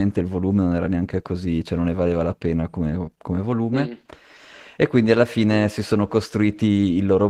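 Opus voice compression runs throughout the speech: SILK codes the lower band and CELT the top, with plainly audible coarse, hoarse, slightly robotic texture, fitting about 16 kbps.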